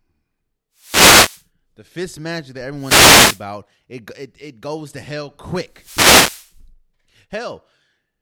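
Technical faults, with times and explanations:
0.75–1.46 s, 2.76–3.45 s and 5.67–6.60 s: wireless microphone noise hit, three times, each lasting 0.7 to 0.9 s. They fall just before "the fist magic that", between "the fist magic that" and "it it it goes", and just after "it goes to hell". Each is a brief swish of static over the speech. The analogue FM radio link weakens as reflected signals cancel, so receiver hiss rises until the signal recovers.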